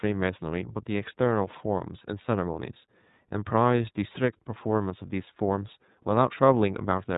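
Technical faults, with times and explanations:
Throughout, iLBC codec: The speech has gone through a narrowband iLBC encoder working in 30 ms frames, at a rate consistent with its 13.33 kbps mode. Each frame's excitation is rebuilt on its own, without carrying detail over from the previous frame, so the voice comes out clear but plainly rough and slightly synthetic. Everything above 3.8 kHz is cut away, leaving the speech dull and boxy.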